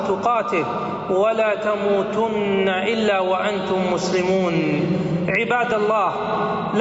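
Gain pumping runs through the whole clip: the gain swings by roughly 10 dB as it is pulled down under each loud sound, which likely comes from input gain set far too high with a fast limiter clamping it. Unlike a noise gate, the level is squashed rather than cut off, within the call path's 8 kHz band.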